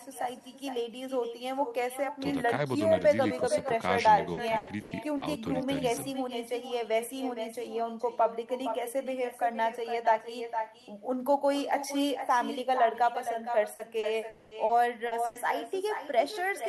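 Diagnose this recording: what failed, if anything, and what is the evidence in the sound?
The whole call has echo with no canceller, so the fault sits in call processing at the far end. Our talker's speech is trailed by a fainter copy about 10 dB down, arriving roughly half a second later and sounding thinner. The far side is playing our audio on a speaker, their mic picks it up, and nothing subtracts it before it comes back across the network round trip.

There are two stretches of repeated packet loss, giving robotic sound, and that's a network fault. From 4.33 to 5.23 s there are four holes totalling 280 ms, with the longest 100 ms. From 13.75 to 15.37 s there are five holes totalling 260 ms, again with the longest at 100 ms. The receiver patches each gap by stretching the last bit of sound, so you get choppy chunks where real audio should be.

Inside that second stretch, from 14.29 to 14.54 s, there's a single 220 ms block where the sound turns into a continued, smeared buzz from start to finish, without dropping to silence. 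That's most likely a long network dropout. Nothing arrived for that span, and concealment ran through the whole gap. When real audio resumes at about 14.54 s, the part that was lost is simply gone.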